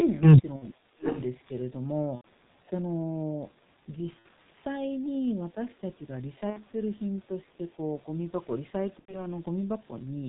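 The whole clip has that G.723.1 codec sound: speech muffled and hoarse, nothing above 4 kHz, consonants smeared because the voice model updates so slowly. The damage is heavy, which fits a bitrate around 6 kbit/s.

At 0.56 s there's the first VoIP packet loss concealed by the speech codec. For about 60 ms, roughly two 30 ms frames, the decoder stretches its last pitch and filter into a sound that fades, and the voice stays weak briefly afterwards.

From 0.84 to 1.06 s the voice sinks by around 30 dB. That's likely speech suppressed in double talk: the echo canceller couldn't separate the talker from the far-end echo and turned everything down.

Overlapping that, from 1.03 to 1.22 s, a delayed copy of the voice comes back about 0.7 s late and around 15 dB below the speech. That's likely echo leak, from a loudspeaker end whose canceller didn't remove everything its microphone picked up.

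The same concealment recurs at 2.15 s (about 90 ms), 4.19 s (60 ms), 6.50 s (60 ms) and 8.99 s (90 ms). Each one is a brief smear that fades, with the voice weak or distorted for a moment after it.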